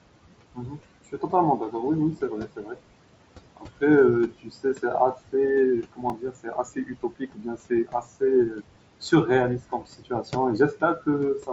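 Noise suppressor artifacts run through the whole clip. The suppressor pulls the room noise down by about 21 dB between phrases and lets it back up under speech.

Speech cut by the noise suppressor occurs at 0.54–0.80, 1.12–1.74, 2.17–2.79, 3.56–3.82, 4.28–5.34, 5.83–8.65 and 9.59–11.07 s. Soft parts of the speech are mistaken for noise and turned down by as much as about 22 dB. Consonants and endings sound swallowed. The longest stretch affects well over a second.

A repeated buffer occurs at 6.10 s, inside the long cut stretch. Fresh audio arrives late, so a tiny slice plays again twice. It is too short to stutter and comes through as a click or brief buzz, which fits a 64-sample buffer. The headset's mSBC path tops out at 8 kHz.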